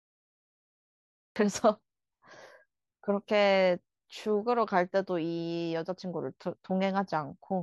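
From 0 to 1.36 s there is only digital silence, and the speech then enters abruptly mid-sound: a cut-off start, where capture began late. Unlike a slow fade-in or a soft onset, there is no attack at all, just an instant jump from nothing to full level.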